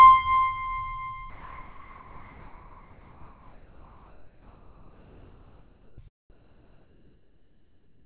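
Comfort noise in place of the background, 1.3 to 5.98 s and 6.3 to 8.04 s: likely discontinuous transmission, swapping the quiet music background for steady, featureless noise, about 2 and 3 dB quieter, band-limited below 4 kHz.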